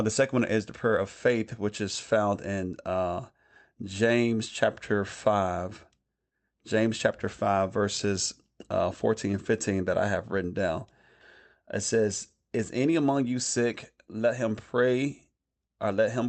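No technical faults are audible.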